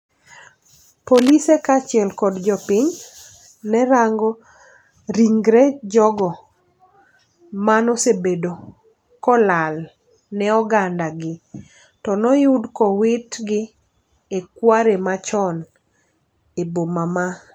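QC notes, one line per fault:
1.12–1.30 s, cable scratch noise: dense, uneven rustling about 10 dB under speech before "kaachiel kod", likely a jostled worn connector; bursty scraping, not separate clicks.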